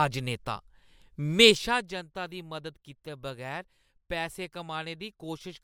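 No technical faults are audible.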